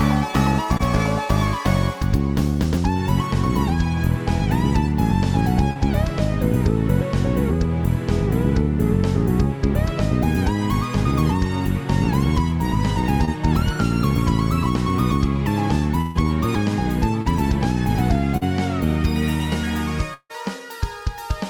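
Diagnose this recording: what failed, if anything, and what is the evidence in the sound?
The network stage failed, with brief short concealed packet loss at 0.77, 5.73, 13.25, 17.22 and 18.37 s. Each time about 20 ms of audio, and 40 ms at 18.37 s, failed to reach the decoder in time. The receiver extrapolated the preceding sound across the hole and cross-faded back into real audio. Each spot is a tiny smear or wobble where a fragment of sound is replaced by a brief continuation of what came before.

At 16.01 to 16.25 s the network delivered a burst of packet loss, about 140 ms of consecutive audio never arriving. The concealer continued the last sound for the whole gap, fading it rather than dropping to silence, so a held buzz or hiss stands in for the missing material. About 13 ms of extra audio is added as well, so the audio resumes slightly late and with that section gone.

At 20.14 to 20.31 s about 160 ms of audio is missing. 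Roughly 156 ms is filled by a fading continuation of the previous sound, and the end of the span sinks into about 50 ms of silence before the signal returns further on. The fade-out into nothing is the signature of a long network dropout. That is likely the cause here: a stall in delivery long enough for concealment to give up.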